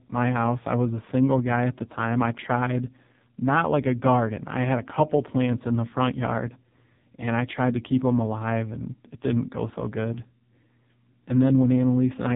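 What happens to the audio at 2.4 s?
AMR narrowband mobile codec damage is present at 2.4 s, as it is across the entire clip. The speech has passed through a narrowband mobile codec that rebuilds the voice from a compact vocal-tract model excited by a few pulses per short subframe, discarding everything above about 3.8 kHz. The heavy, buzzy, synthetic texture points to one of the codec's lowest modes, around 6 kbps, which leaves the voice thin, dull and robotic.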